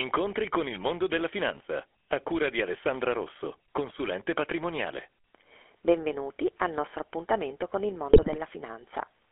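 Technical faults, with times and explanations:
Throughout, GSM full-rate codec: The speech has passed through the original GSM encoder, which models the vocal tract and excites it with a sparse, regularly spaced pulse train, discarding most of the excitation detail. The result is a plainly audible buzzy, gravelly roughness in the voice. The line band runs only from 300 Hz to 3.4 kHz, so the sound is thin and boxy. All of this fits a 13 kbps full-rate stream.
8.10–8.37 s, GSM bit errors: Just after "nostro appuntamento con il", corrupted bits reached the speech decoder, as on a weak radio link. Wrong filter, pitch and gain values make the decoder rebuild each frame with a distorted spectrum or a jump in level. For about a quarter of a second the speech breaks into squawks, pops and gargling. The damage fits roughly thirteen consecutive frames hit at an error rate near 2 percent.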